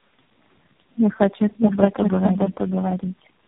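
A speech clip with two faults throughout. A doubled audio track runs the whole way. A second, equally loud copy trails roughly 0.7 s behind, likely from an edit holding two copies out of step. Tandem speech coding makes the speech rough, muffled and warbly, with nothing above 3.8 kHz. This suggests about four codecs in a row, each re-coding the last one's damage, ending in AMR-NB.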